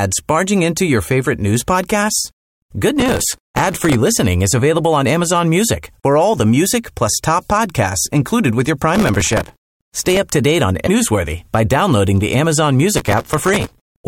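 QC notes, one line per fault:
3.00–3.94 s, 8.95–10.17 s, 12.97–13.97 s: processor overload crackle. Dense runs of missed buffer deadlines, each refilled with a stale fragment, produce gritty tearing. The second run starts after "podcasts included with your", and the first ends before "listening is available on".
10.83–10.89 s: damaged data in a compressed stream. Between "up to date on" and "newsworthy by downloading the", corrupt frames desync the decoder, giving a brief glitch.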